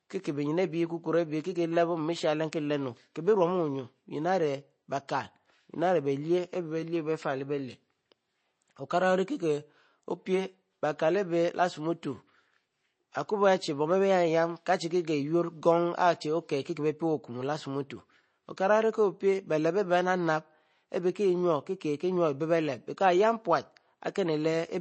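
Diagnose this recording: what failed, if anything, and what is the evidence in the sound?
The fault sits at the codec stage. The speech has no content above 8.3 kHz, and the damage is plainly audible through all of it. The top is cut flat, and the remaining detail sounds thin and watery where weak frequency lines drop in and out between frames. This is likely MP3 compression, and the narrow band fits a low bitrate around 32 kbps. The encoder runs short of bits, removes the treble and zeroes quiet components.

A brief pre-echo comes at 18.57 s, just before "ori ko pie bie". For about 10 ms a short hiss leads the attack, and the onset sounds softened. This also belongs to the codec stage. A transform codec spreads its quantisation noise across the whole block. Here the sharp onset lands late in its block, so noise scaled for the loud part also fills the quiet gap just before it.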